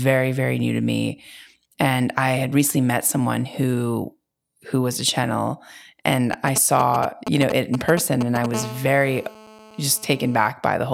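From 6.33 to 8.46 s, a 2G phone close to the recording chain is signalling to its network, sending short clusters of radio bursts rather than a continuous stream, and the audio circuitry rectifies them. The result is the GSM signalling bursts pattern: a galloping dit-dit-dit of short buzzes at the 217 Hz burst rate, cutting across the speech at a level only a little below it.

From 8.54 to 10.50 s, the same kind of interference settles into a steady stream of radio bursts at 217 Hz, which points to the phone now being in a call. Rectified by the audio circuit, this becomes GSM phone buzz: a hard, raspy 217 Hz tone rich in harmonics that has no relation to the speech. It sits about 17 dB below the speech, so it is less dominant than the earlier bursts but continuous.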